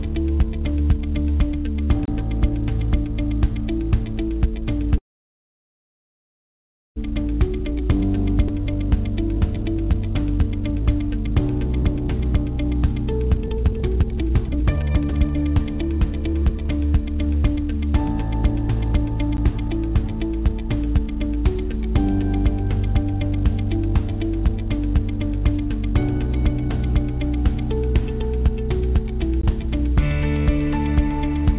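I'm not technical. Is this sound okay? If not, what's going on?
No. At 2.05 to 2.08 s, at 19.37 s and at 29.41 to 29.43 s there is a block of digital silence. The sound abruptly drops to nothing and back, which you hear as a tick or a very short hole.

From 4.98 to 6.98 s there is a call audio freeze. Incoming sound stopped arriving for about two seconds, likely because the network held up the data. The last sound is stretched into a fading buzz and then goes quiet, and playback resumes where it left off, so nothing is lost.

There are two stretches of jitter buffer speed-up. After the freeze the system had built up extra delay, so it trimmed tiny slices to catch up. From 7.48 to 8.90 s it runs only slightly fast. From 9.38 to 16.65 s it runs about 20% faster, cutting roughly 1.5 seconds in total. It sounds hurried, but the pitch stays normal.

At 8.48 to 8.51 s there is a skip ahead. A chunk of sound, about half a second, was dropped. 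Playback jumps straight forward, and the two sides are joined almost directly, so a short piece is missing.

The whole clip came through a phone-style call codec that keeps nothing above 4 kHz, so it sounds narrow throughout.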